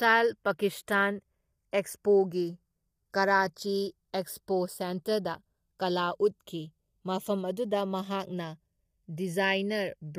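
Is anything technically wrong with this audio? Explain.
Yes, two faults run through the whole speech clip.

Channels drifting apart is present from start to finish. Two recording devices on separate clocks disagree by roughly 30 parts per million, so the delay between their channels slides steadily, reaching around 0.4 ms by the end. Folded to mono, that changing delay makes comb-filter notches travel slowly across the spectrum, heard as a gradual flanging sweep. Unlike a flanger effect, which oscillates back and forth, this sweep moves in one direction only, following the accumulating clock error.

Low-delay AAC compression is plainly audible throughout. The speech sounds rough and grainy, with noise filling the gaps between harmonics, and the top band sounds either dulled or synthetic. This points to AAC-ELD at a low rate, which fits about 32 kbps. The codec behind it is likely the low-delay AAC used in video calling. 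It codes short frames with a low-delay window. A lost-packet fault would instead produce dropouts at particular moments.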